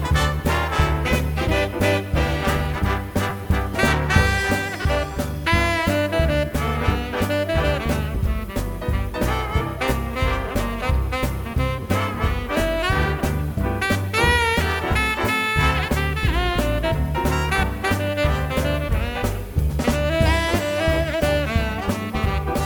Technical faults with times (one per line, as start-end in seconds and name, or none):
3.30 lost LE Audio frames
4.82-4.85 lost LE Audio frames